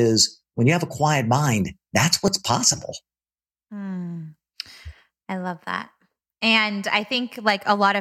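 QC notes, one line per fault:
2.27 s, repeated buffer: the audio stream stalls for a moment and the same tiny slice of speech plays twice in a row, with a hard join where the repeat starts. The repeated piece fits a buffer of about 10 ms, so short that it doesn't register as a stutter; it comes across as a quick click or brief buzz. The playback fell behind, so the device replayed its last chunk instead of waiting, and roughly 10 ms of real audio goes missing there.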